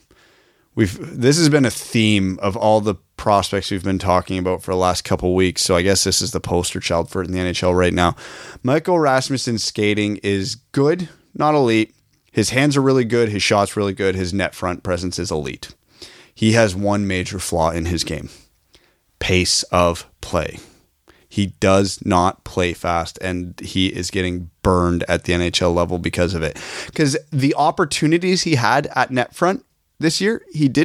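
Nothing to flag here: it's a speech recording, and there's no technical fault to point to anywhere in it.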